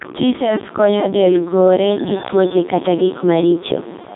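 Throughout, the speech carries Codec 2 vocoder damage. The decoder rebuilds the voice from sine waves, so it sounds robotic and buzzy and falls silent above 3.8 kHz, with a rate pointing to about 3.2 kbit/s. Unlike band-limiting or waveform-codec smearing, the natural voice texture itself is gone.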